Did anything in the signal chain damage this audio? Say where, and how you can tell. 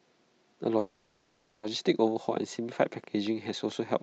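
Yes. At 0.79 s a call audio freeze sets in, most likely a network delay that emptied the jitter buffer. The last sound is stretched into a fading buzz for 0.84 s, then speech resumes at 1.65 s with nothing lost. A spectrogram shows smeared, decaying horizontal bands.

From 2.82 s to the end, a train of clicks ticks at a regular 4.4 per second, peaking about as loud as the speech. This likely comes from interference in the analogue wiring or a faulty connection or power supply. The waveform shows evenly spaced spikes, and the spectrogram shows thin broadband vertical lines.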